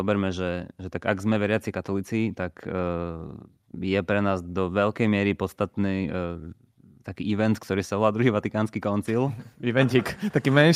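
Nothing in the recording stood out as a technical problem on listening.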